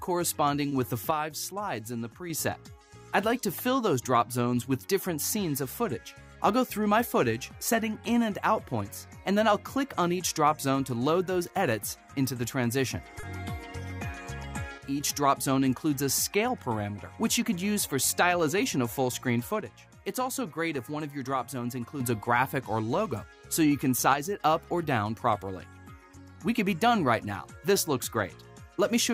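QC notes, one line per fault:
0.69–0.72 s, short stall from a late packet: a packet arrived late and the buffer ran dry. The last sound is held about 20 ms with a faint buzz or dip, then resumes with nothing lost.
1.11–2.30 s, one channel drops out: the level falls abruptly by about 6 dB, then recovers. A stereo channel likely went missing, halving what both channels shared.
13.20–13.24 s, short stall from a late packet: the receiver stretched the last sound about 30 ms while waiting. It is held too long, then continues from the same place.
14.78–15.00 s, one channel drops out: a brief dip of about 6 dB. Likely one stereo channel vanished, so the mono sum lost half its common content.
19.61–22.01 s, one channel drops out: a longer stretch sits about 6 dB lower, dropping and returning abruptly. The likely cause is loss of one stereo channel.
24.14–24.40 s, one channel drops out: a short, sudden fall of about 6 dB. 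One stereo channel likely cut out, and anything only in that channel went missing.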